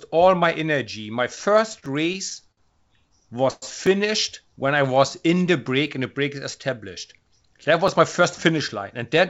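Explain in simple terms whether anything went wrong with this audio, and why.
Repeated stalls (stutter): audio packets arrived late, so the receiver kept stretching the last sound to fill in. The speech drags and stutters from 1.36 to 2.59 s and again from 3.09 to 3.64 s, where the longest hold is about a tenth of a second.

Overlapping chunks: the audio was handled in 2-second pieces that each began slightly early. A 7 ms bit plays twice, heard as a click at 1.86, 3.87, 5.87 and 7.88 s.

Jitter buffer slow-down: the receiver was short of stored audio, so it repeated tiny slices to build up a reserve. From 4.43 to 5.41 s the speech runs at about 93% speed without any change in pitch.

The call codec cuts everything above 8 kHz, which removes the very highest sounds across the whole clip.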